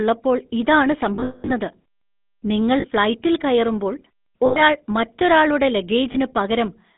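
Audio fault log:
Throughout: GSM full-rate codec. The speech has a buzzy, gravelly roughness, and the band runs only from about 200 Hz to 3.7 kHz. This points to the 13 kbps full-rate coder, which rebuilds the voice from a vocal-tract model driven by a coarse, regularly spaced pulse excitation.
1.16–1.51 s, 2.80–2.86 s, 4.46–4.83 s, 6.12–6.16 s: lost GSM frames. The sound freezes into a rough, metallic ring while the decoder repeats the last good frame. At 1.16 s about 260 ms is lost across 320 ms, the longest gap about a fifth of a second. The others are much shorter.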